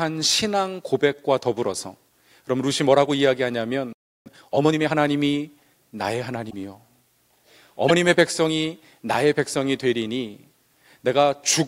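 At 3.93 s the speech cuts out mid-flow and stays silent for about 330 ms until 4.26 s. This playback stall most likely comes from the player running out of buffered data or its output thread being blocked, leaving the output with nothing to play.

From 4.26 to 4.92 s the speech is hurried to 1.5 times normal speed at unchanged pitch. This is time-compressed catch-up: the player shortens the backlog built up during the stall by dropping small segments and cross-fading across the gaps.

Two brief disruptions follow, from 6.49 to 6.54 s and from 7.88 to 7.91 s. At each, the audio skips forward with a short glitch. The likely cause is a broken MP3 bit reservoir, consistent with 26.1 ms frames. After missing frames, the next frame reads borrowed data from bytes belonging to another frame and decodes briefly as garbage.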